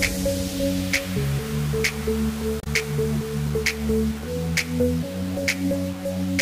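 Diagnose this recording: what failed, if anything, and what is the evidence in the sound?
Throughout the clip the sound carries a grainy, gritty distortion that rises and falls with the signal. The stage is sample-format conversion: the likely cause is low bit depth without dither, with rounding to a very coarse grid, roughly 5 bits. The error sits about 20 dB below the signal. On a waveform, quiet stretches appear as visible staircase steps. A spectrogram shows harmonic smearing that tracks the signal instead of a flat noise floor.

At 2.60 to 2.67 s there is a brief glitch lasting about 70 ms. This is damaged data in a compressed stream, at the codec or storage stage. Corrupted bytes made the decoder misread those frames, lose sync and hunt for the next valid frame header. On a spectrogram it shows as a short broadband smear or an abrupt discontinuity. The waveform shows a sharp break there.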